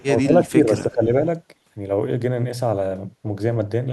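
From 0.00 to 0.05 s a faint echo leak appears, a copy delayed about 331 ms and roughly 30 dB down, likely from an echo canceller missing loudspeaker pickup. Between 0.06 and 1.14 s the speech dips in level, around 15 dB at its deepest: speech suppressed in double talk, likely with the echo canceller turning down its own talker along with the loudspeaker echo.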